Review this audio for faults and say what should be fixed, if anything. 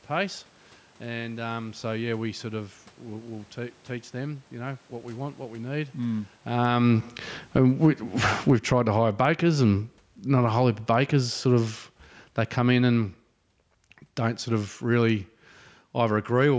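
Automatic gain falling appears twice. Just after "want what we need", from 5.99 to 13.22 s, the gain control judges the input too loud or its background noise too strong and pulls its gain down by about 16 dB. Level and room noise sink together, though the talker also shifts around 6.5 s. A second, smaller drop of about 4 dB runs from 14.5 to 16.52 s. On a waveform the envelope tapers steadily. On a spectrogram the background band dims along with the speech. Prevent it by reducing the input level before the gain control, or by slowing or disabling its downward adjustment.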